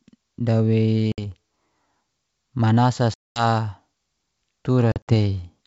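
Packet loss on an ADPCM call strikes this speech clip at 1.12 to 1.22 s (about 60 ms missing), 3.14 to 3.45 s (about 220 ms) and 4.92 to 5.10 s (about 100 ms scattered over 160 ms). Each gap drops to hard-edged silence, and because the decoder's adaptive predictor and step size lose track of the sender's, sound resumes slightly distorted before settling, over a wideband G.722-style channel.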